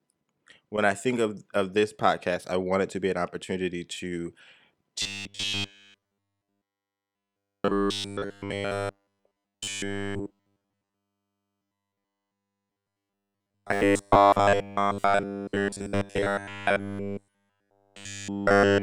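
From 5.02 s to the end, robotic sound from repeated short buffers: a rigid 100 Hz metallic buzz, likely from about 10 ms of audio being looped continuously.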